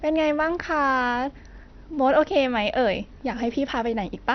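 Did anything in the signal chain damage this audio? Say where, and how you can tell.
Yes, at the codec stage: speech throughout is dull, empty above 6.2 kHz, gurgly and granular, likely MP2 compression starved of bits, consistent with roughly 48 kbps.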